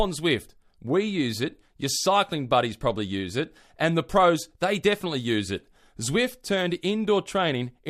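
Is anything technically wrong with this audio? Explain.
No, nothing is technically wrong with this audio.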